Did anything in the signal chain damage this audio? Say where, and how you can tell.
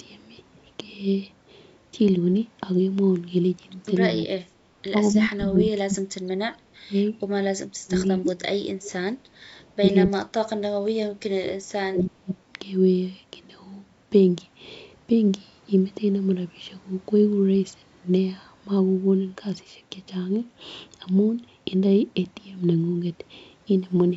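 Yes. The speech dips and breaks up at 4.17 to 4.36 s, 5.15 to 7.15 s, 7.61 to 9.11 s and 9.8 to 12.36 s, falling by about 20 to 35 dB in places. This is call processing, likely speech suppressed in double talk: the echo canceller could not tell the near talker from loudspeaker echo and attenuated both.

The room background drops by about 12 dB at 4.64 to 4.76 s and 9.39 to 9.52 s, then returns after roughly a tenth of a second. This is background gated by the echo canceller, again in call processing: it clamped the microphone while the loudspeaker was active.

At 8.84 to 8.91 s a faint duplicate of the sound appears about 258 ms late, roughly 20 dB under the direct speech. This is likely an echo leak. The canceller on the loudspeaker side left some residue at the call-processing stage, which was sent back down the line.

From 23.78 s to the end, the treble dulls and a gritty grain rises over the audio. 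This is a Bluetooth SBC bit pool drop at the codec stage, which fits the bit pool falling from 28 to 14, near 108 kbps. The smaller bit budget starves the upper sub-bands and coarsens the quantisation of the rest.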